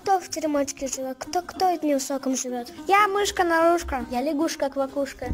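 Crude rate conversion runs throughout the clip. Samples were repeated at intervals with no filtering, which fits a jump from 44.1 kHz to 48 kHz, leaving an error roughly 25 dB below the sound that appears as a gritty, inharmonic fizz trailing loud and high passages.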